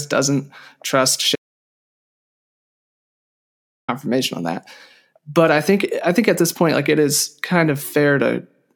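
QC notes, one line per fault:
1.36–3.88 s, audio dropout to silence: the speech cuts off mid-flow and returns after about 2.53 s of dead silence with no room tone underneath, so everything spoken in that span is lost. The likely cause is the input dropping out while silence kept being written.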